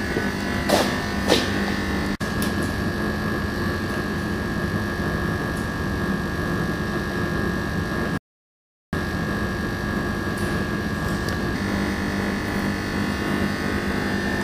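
At 8.18 s the sound drops to silence and resumes at 8.93 s exactly where it left off, with nothing skipped. This is a rebuffering stall: the player exhausted its downloaded audio and waited for more, adding about 0.75 s.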